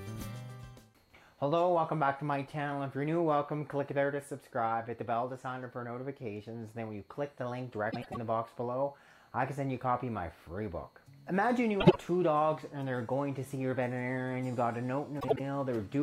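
The audio has frames out of order at 7.91–8.17 s, 11.80–11.96 s and 15.20–15.40 s, where two adjacent blocks of about 105, 52 and 78 ms swap places, giving a garbled flutter.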